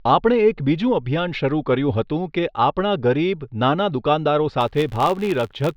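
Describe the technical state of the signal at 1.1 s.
At 1.1 s the speech signal is intact, with no audible dropout, distortion, glitch or other technical fault at that moment.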